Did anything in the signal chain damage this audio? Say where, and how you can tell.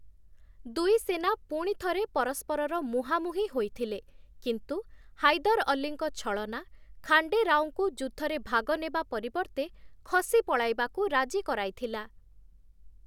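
No, no damage is audible.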